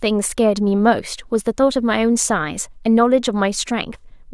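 Listening to this speech recording, nothing stood out as a technical problem at any point.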